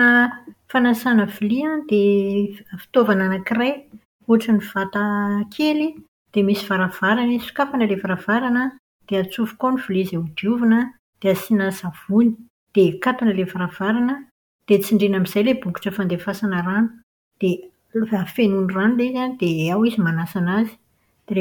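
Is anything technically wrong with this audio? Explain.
No, nothing in this speech recording stood out as a technical problem on listening.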